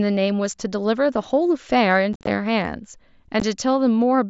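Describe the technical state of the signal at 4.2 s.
At 4.2 s the speech is intact, with no fault present, and it is carried through the mSBC Bluetooth headset codec, band-limited at about 8 kHz.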